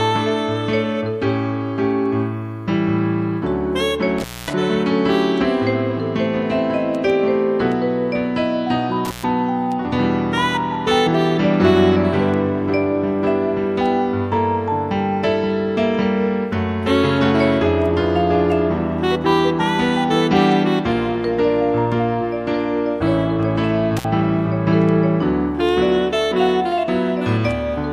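Intermittent contact at 4.18, 9.05 and 23.97 s: a loose connection opens for about 240, 130 and 60 ms, and the crackle at each break distinguishes it from a clean digital dropout.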